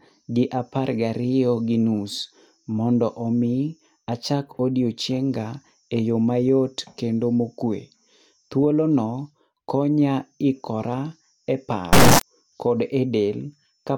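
From 11.93 to 12.23 s, integer read as float: 32-bit integer samples decoded as 32-bit float, giving a harsh, maximally loud buzzing square wave; the waveform slams between zero and the clipping limit.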